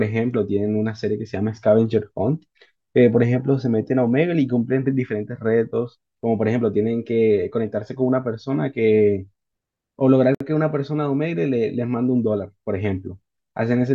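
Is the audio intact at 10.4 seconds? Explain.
No, there's a gap at a join of encoded pieces from 10.35 to 10.40 s: a 58 ms hole of silence where untrimmed encoder delay and padding sit between separately encoded chunks. The speech drops out briefly, then picks up right where it left off.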